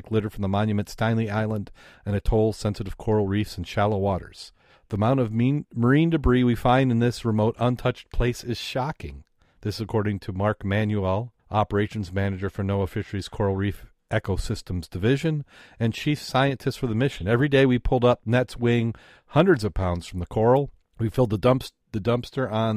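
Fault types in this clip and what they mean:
Nothing stood out on listening to this speech.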